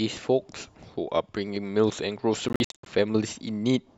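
From 2.49 to 2.86 s the speech breaks into a cluster of short silences, the longest about 73 ms, adding up to roughly a quarter second. That's a Bluetooth dropout, most likely packets missing the headphones' deadline, with the speech picking up as though it had carried on underneath.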